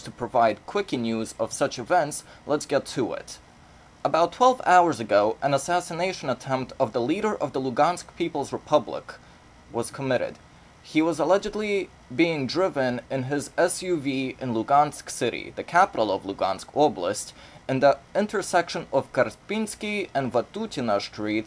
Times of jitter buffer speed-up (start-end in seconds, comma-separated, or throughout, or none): none